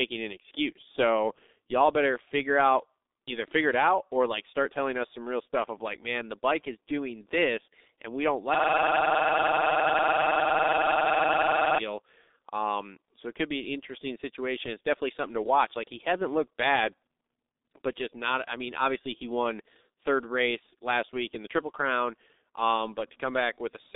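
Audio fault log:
Throughout, G.723.1 codec: the sound is band-limited to roughly 250 Hz to 3.7 kHz, with nothing above 3.8 kHz. Heavy coding damage leaves it muffled and hoarse, with smeared consonants, because the slowly updated voice model fits a very low bitrate of about 6 kbit/s.
8.55 to 11.79 s, system hang loop: a single 46.44 ms slice repeats exactly, about 70 times, at 21.5 Hz. The system froze while the audio hardware kept replaying one ring buffer, which fits a 2048-sample buffer.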